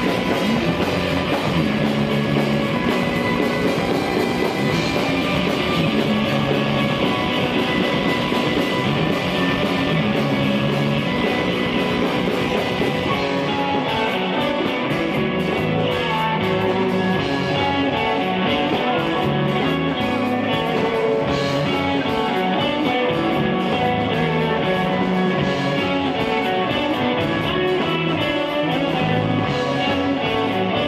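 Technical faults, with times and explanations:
No technical faults can be heard anywhere in the clip. Nothing in it calls for a time or an explanation.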